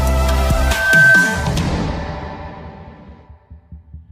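A microphone was picking up its own loudspeaker, and at 1.6 kHz the loop gain rose above one. From 0.54 to 1.59 s that frequency feeds on itself as loudspeaker feedback squeal, swelling over a fraction of a second into a piercing tone roughly 10 dB above the sound.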